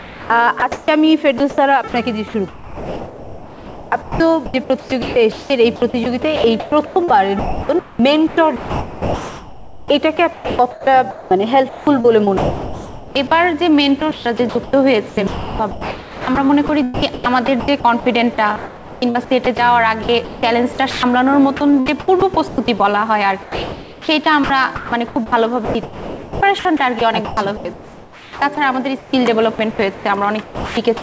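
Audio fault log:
0.00–1.94 s, 2.48–13.31 s, 13.99–21.74 s, 21.57–22.80 s, 23.42–31.02 s, sound chopped by the voice detector: stretches totalling about 0.6, 6.2, 2.8, 0.3 and 3.5 s become smooth comfort noise, likely from sender-side gating. Unlike packet-loss concealment, which repeats or warbles, the background flips to steady synthetic hiss, within the band that ends at 8 kHz, as a 64 kbps G.722 call would.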